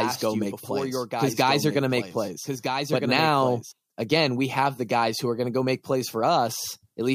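From the very start until 3.72 s, the speech carries a doubled audio track. A second full-band copy trails about one and a half seconds behind, some 5 dB quieter, with no room colour. It stops abruptly. A slower second capture path is the likely cause.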